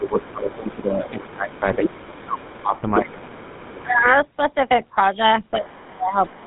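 Throughout, the GSM full-rate codec leaves the speech buzzy and gravelly, with nothing above 3.9 kHz, consistent with a 13 kbps vocal-tract model. From 0.0 to 4.05 s the talker's speech dips by up to roughly 20 dB for around three seconds in total, likely speech suppressed in double talk as the echo canceller ducks both voices. Over the same stretch the other side's voice is leaking through at 0.06 to 0.32 s, faintly; at 1.56 to 2.99 s, nearly as loud as the talker; and at 3.33 to 4.08 s, well below. It returns at 5.52 to 5.85 s and 6.25 to 6.36 s, each time faint, probably as residual echo left by the canceller. From 5.57 s to the end, a second suppression cuts the speech by up to roughly 25 dB for about half a second.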